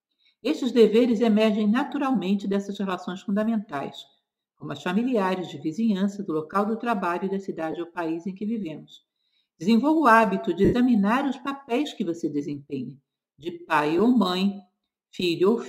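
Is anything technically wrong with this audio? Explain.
Yes, there are three short dropouts from lost LE Audio frames, at 7.72–7.74 s, 10.65–10.74 s and 13.98–14.00 s. The LC3 decoder fills each gap by replaying the last spectrum with randomised signs, so tones blur into a brief noisy smear. The longer middle gap, roughly 80 ms, fades noticeably toward silence.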